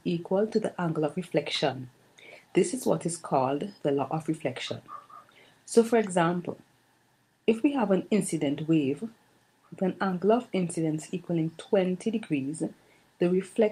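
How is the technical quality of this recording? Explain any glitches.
The recording has a timing problem that runs the whole way through, caused by two devices keeping time at different rates.

Clock drift between sender and receiver is present from start to finish. The sending device's clock runs fast, by something like 4 percent, so audio arrives quicker than the receiver plays it out. The receiver's jitter buffer keeps filling beyond its target, and it has to shed material to avoid overflowing. What you hear is a faint restlessness in the flow of the sound, small hiccups recurring at uneven intervals rather than one clean glitch.

Repeated timing corrections run from 0.09 s to 13.6 s, effectively the entire clip, at a net speed of 104 percent. Because the incoming stream is ahead, every correction goes the same way: the receiver trims out short slices to catch up, never inserting any. 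The cuts are irregularly spaced and individually tiny, so they come across as slight skips and a gently uneven, hurried tempo rather than obvious dropouts.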